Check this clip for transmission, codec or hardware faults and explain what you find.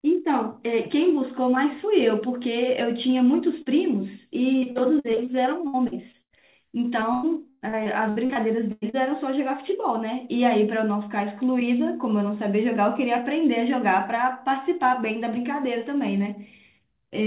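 Two kinds of transmission fault are present, both from lost packets on a call path whose band stops at 4 kHz, which fits G.711 mu-law at 64 kbps.

Short concealed packet loss, 3.62 to 3.68 s: about 40 ms of audio arrived too late or not at all, and the receiver extrapolated the preceding sound for roughly 36 ms before crossfading back. It comes across as a brief smear or wobble in the speech.

Repeated packet loss (robotic sound) occurs at 4.60 to 5.42 s (nine gaps), 5.68 to 6.35 s (five gaps, longest 90 ms) and 7.00 to 8.95 s (ten gaps, longest 113 ms). Concealment patches about a quarter to a third of each stretch, so the speech turns choppy with fragments missing.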